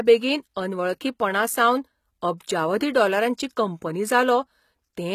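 HE-AAC compression runs throughout the speech, with plainly audible damage: nothing reaches above 14.9 kHz, and the upper treble sounds synthetic, leaving s sounds gritty and metallic. The likely cause is spectral band replication copying lower bands upward, which fits a bitrate around 20 kbps.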